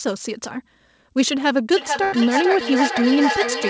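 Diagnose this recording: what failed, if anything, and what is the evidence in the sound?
Feedback echo between two devices, a call-processing loop: from 1.77 s to the end, the sound returns at roughly 0.4 s intervals, peaking about 3 dB below the speech. These discrete, evenly spaced repeats rule out room reverberation.

Burst of packet loss, a network fault: at 2.04–2.15 s, about 82 ms of held, fading concealment fill replaces about 80 ms of lost audio, and the speech then resumes further on. It differs from a simple dropout because the gap is filled rather than silent.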